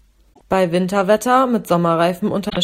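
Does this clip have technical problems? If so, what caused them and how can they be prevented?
Yes: damaged data in a compressed stream, at 0.30 to 0.41 s and 2.46 to 2.57 s. Corrupted bytes make the decoder misread frames and lose sync, giving brief glitches that show as abrupt breaks on a spectrogram. Prevent it with checksummed, error-protected storage and transfer.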